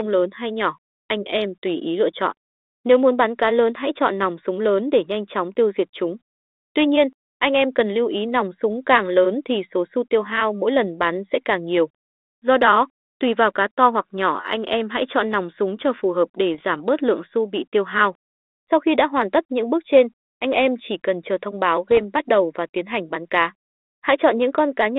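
At 16.54 to 16.71 s and again at 21.91 to 21.98 s, the speech is hit by bit errors on an ADPCM link. Flipped bits corrupt the coded differences, and since the decoder adapts its step size and predictor from those same codes, each error keeps ringing for several milliseconds. The result is pops and rough bursts with brief level jumps. The second burst is shorter but denser, which suggests a higher error rate. The surrounding 300 Hz to 3.7 kHz band comes from 32 kbit/s G.726.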